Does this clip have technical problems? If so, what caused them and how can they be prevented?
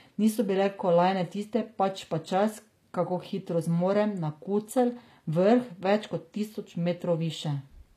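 Yes. Across the whole speech clip the s sounds come out gritty and lispy, with a bright but synthetic treble, and nothing is present above about 14.9 kHz. The cause is likely HE-AAC compression: the encoder codes only the lower spectrum and fills the top by copying lower bands upward under a rough envelope, so the rebuilt harmonics don't align. The damage fits a bitrate near 24 kbps. Prevent it by encoding at a higher bitrate with plain AAC or a lossless format.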